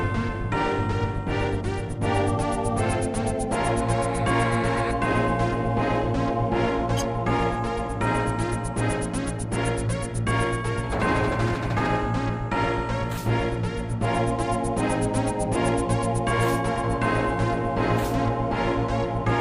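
No technical faults are audible anywhere in the recording.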